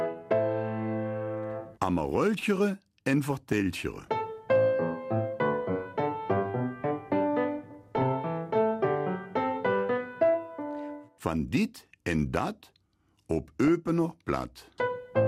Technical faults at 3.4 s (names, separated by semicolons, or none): DAB burbling